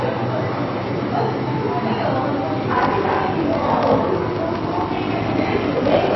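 From the start the sound is dull and watery, with nothing above about 5.8 kHz and plainly audible swirling where weaker detail flickers in and out. This is likely MP3 compression, with the treble cut and faint components dropped to save bits, consistent with a bitrate near 24 kbps.

At 2.70 s a steady buzz at about 46.9 Hz appears and lasts to the end, while the audio drags to roughly 0.86 times its normal speed. This is a block size mismatch (padded): each block arrives short and is filled out with silence, and the buzz rate fits a reading stage that expects 1024-sample blocks.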